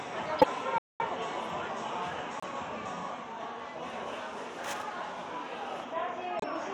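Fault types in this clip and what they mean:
Corrupt frame decoded: Damaged compressed frames were decoded and played rather than hidden. Misread gains and codes put energy at wrong frequencies for as long as each bad frame lasts. Here it happens three times, at 0.39 to 0.46 s, 2.39 to 2.44 s and 6.39 to 6.44 s. Each hit spans only two or three frames. Each is a short chirp or noisy blip that does not belong to the sound around it.
Playback stall: The output drops to silence from 0.78 to 1.00 s, a gap of about 220 ms, then the sound carries on. The break cuts in mid-flow and is long enough to hear clearly as a hole. The likely cause is the player running short of data or its thread being blocked, so nothing reached the output until it recovered and resumed.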